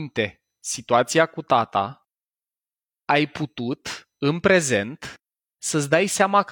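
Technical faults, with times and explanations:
Nothing technical stands out here; the speech comes across steady and whole, with no trouble to point to anywhere along the way.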